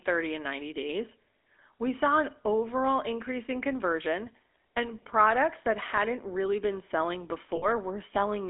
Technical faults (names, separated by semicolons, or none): GSM full-rate codec; lost GSM frames